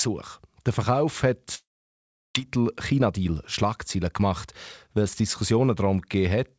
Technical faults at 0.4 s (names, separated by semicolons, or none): none